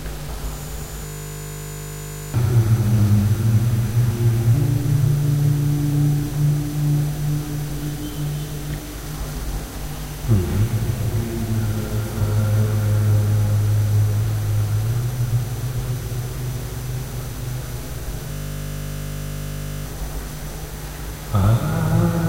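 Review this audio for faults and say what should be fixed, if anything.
A system hang loop at 1.06–2.34 s and 18.32–19.86 s repeats one 20 ms buffer, giving a 50 Hz buzz. The waveform shows identical repeating cycles and the spectrogram shows even 50 Hz harmonic bands. About one and a half seconds of audio is lost each time. To prevent it, have the audio driver stop or mute output when the host stops refilling the buffer.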